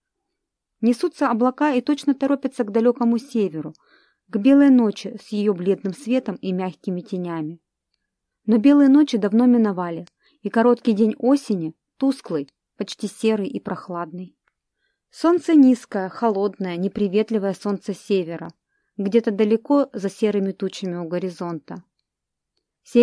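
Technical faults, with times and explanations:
There are no technical faults to list with times and explanations.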